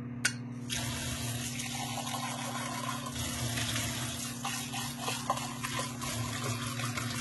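Throughout, likely HE-AAC compression at a bitrate fitting about 16 kbps fakes the treble from copied lower bands; nothing sounds above 11.8 kHz, and highs turn gritty, metallic.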